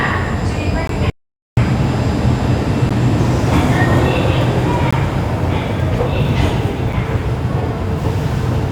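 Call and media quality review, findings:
Gap between stream segments at 0.87, 2.89, 4.91 and 6.93 s. Hard-edged silent holes of about 7 to 19 ms, recurring every 2 s, which fits 2-second segments with timestamps that don't quite meet. The player pads each gap with silence. Nothing is lost, but each hole adds a little time to the playback. Probable component: segmenter or packager timestamping.

Audio dropout to silence, 1.10 to 1.57 s. Sound cuts out mid-flow, leaving silence with no room tone, then returns abruptly. About 0.47 s of audio is missing, not delayed. The likely cause is a lost input, such as a disconnected device, a failed link or a stray mute, while the recorder or encoder kept writing silence. Probable component: capture input path.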